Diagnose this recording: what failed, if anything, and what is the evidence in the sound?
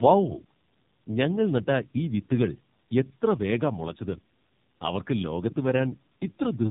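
The failure is at the codec stage: tandem speech coding, audible for the whole clip. The speech is band-limited with nothing above 3.8 kHz, and it has the layered roughness, muffling and warble of two low-rate speech coders in series. The second coder's artefacts sound consistent with narrowband AMR at around 7.4 kbit/s, applied on top of an earlier coder's damage. Each decode and re-encode compounds the loss, so quality falls below what either link alone would produce.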